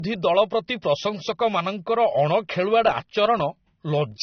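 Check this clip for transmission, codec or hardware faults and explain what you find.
One fault runs through the whole recording.

Low-bitrate audio saved at a high bitrate, throughout: the speech has nothing above 6.3 kHz, and that hard ceiling and dull, smeared texture point to a likely earlier low-bitrate encode, later re-saved as a high-bitrate MP3 that cannot restore the discarded detail.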